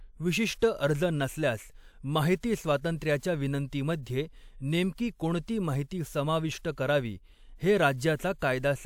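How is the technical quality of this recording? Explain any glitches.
One glitch stands out, a codec artefact near the three-second mark. Pre-echo at 3.18 to 3.23 s: a short wash of hiss arrives about 51 ms before a sharp onset in the speech. The encoder divided the audio into transform blocks and spread the quantisation noise across the whole block, so the noise sized for the loud attack also fills the quiet moment just ahead of it. The attack itself sounds softened and smeared rather than crisp.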